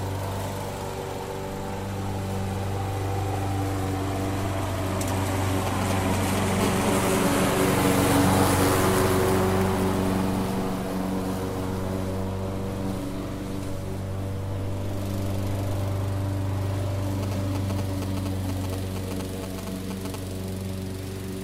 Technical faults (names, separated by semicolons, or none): GSM signalling bursts; GSM phone buzz